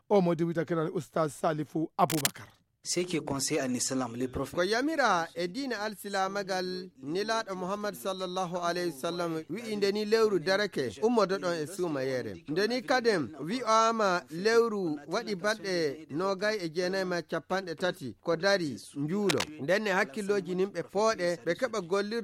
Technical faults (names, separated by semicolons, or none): cable scratch noise